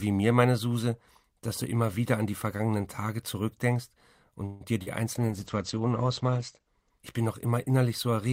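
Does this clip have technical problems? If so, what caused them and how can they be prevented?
Yes. From 4.45 to 4.63 s there is a call audio freeze. The speech stalls into a fading buzz for about 150 ms and then resumes where it stopped, likely because delayed packets drained the jitter buffer. A larger adaptive jitter buffer or a more stable network path prevents it.

At 4.82 to 4.88 s, short concealed packet loss leaves a brief smear. About 40 ms never arrived and was patched by extending the previous sound. Forward error correction or redundant packets would cover such losses.

From 5.16 to 7.98 s, a call bitrate drop from 32 to 11 kbps makes the speech rough and muffled. Bandwidth narrows from 20 kHz to 8 kHz, and the worst stretch lasts about 1.3 s. Reserving enough uplink capacity, or keeping competing traffic off the link, keeps the encoder at a higher rate.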